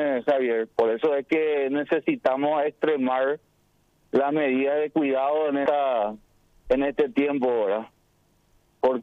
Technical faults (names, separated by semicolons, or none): damaged data in a compressed stream